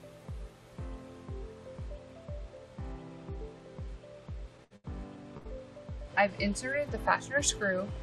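At 4.64 to 4.73 s there is a burst of packet loss. About 60 ms of audio never arrived, and the receiver covered the gap by continuing and fading the last sound for roughly 61 ms. It then picks up further on with that stretch gone, so the audio jumps forward instead of simply pausing. The same happens at 5.37 to 5.48 s: 60 ms is lost under a 76 ms faded fill, and the timing shifts by about 16 ms.

Between them, at 4.76 to 4.87 s, comes a short stall from a late packet. The jitter buffer ran dry, and the last sound is held for about 79 ms, with a slight buzz or dip, until the packet turns up. Playback then resumes exactly where it stopped, so nothing is missing, only delayed by 79 ms. That continuity sets it apart from the two bursts, where the audio after the fill has skipped ahead.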